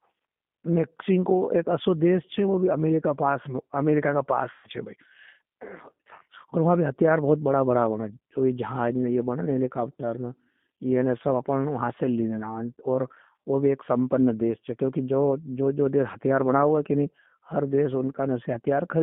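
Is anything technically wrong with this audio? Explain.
Yes. The speech has been through the G.729 codec for its whole length. It rebuilds speech at roughly 8 kbit/s from a filter, pitch and pulses. The band runs only from 150 Hz to 3.5 kHz, and the voice sounds plainly rough and synthetic.

From 4.52 to 4.68 s there is VoIP packet loss concealed by the speech codec. About 120 ms of speech went missing. The decoder stretched its last sound into a fading buzzy tone or coloured noise, and the voice stays weak briefly afterwards.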